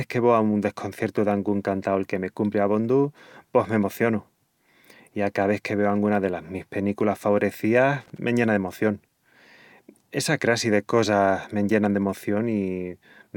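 At about 8.00 s the speech gets hit by a short burst of loose connector crackle that runs to roughly 8.18 s, so under a fifth of a second. What's going on there is a worn or grubby contact somewhere in the chain flickering between connected and not, chopping the signal on and off. You hear it as a ragged, scratchy crackle laid over the voice.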